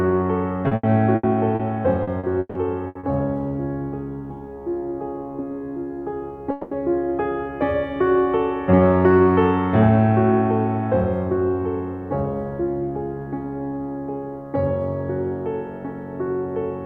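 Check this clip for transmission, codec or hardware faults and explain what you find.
The music has two kinds of network fault, both early in the clip.

First, repeated packet loss (robotic sound) hits twice: 0.67 to 1.62 s and 2.03 to 3.06 s. Chunks of audio kept failing to arrive, and each hole got patched by stretching the last bit of sound. The first stretch has four gaps, the longest 80 ms, with about a quarter of it patched. The second has five gaps, up to 160 ms, and about 35% patched. You hear the music go choppy, with bits of it missing.

Then at 6.51 to 6.74 s there's a 200 ms hole where the music is replaced by a smeared continuation of the last sound rather than going silent. Playback picks up again right after, minus that piece. That's most likely a long network dropout. It's a short example, but the buzzy hold in place of real music gives it away.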